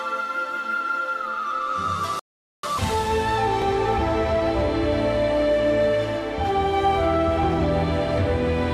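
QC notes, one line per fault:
2.19–2.63 s, rebuffering stall: the player ran dry and went silent for about 0.44 s, then picked up right where it stopped, so nothing's missing, just delayed.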